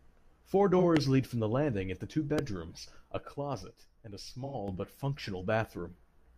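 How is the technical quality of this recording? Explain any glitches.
The recording has three kinds of glitch: two dropouts from lost AAC frames, two loud pops, and one stretch where the level suddenly drops.

AAC frame loss with concealment occurs at 0.78 to 0.84 s and again at 4.45 to 4.55 s. The decoder covered missing data by reusing the last good spectrum. The first gap, about 43 ms, fits one lost frame. The second, about 85 ms, fits two. Each is heard as a brief smeared, phasey patch in the speech.

A loud pop sits at 0.97 to 0.99 s, peaking around 20 dB above the speech, and another at 2.39 to 2.41 s, peaking roughly 15 dB above it. Each is a single sharp pop with the speech continuing underneath. The likely cause is a voltage spike from a switch, plug or static discharge.

A sudden gain jump runs from 3.28 s to 4.68 s, where speech and background noise both fall together by 6 dB and then return. 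The abrupt step without a ramp is likely from a digital gain setting applied instantly.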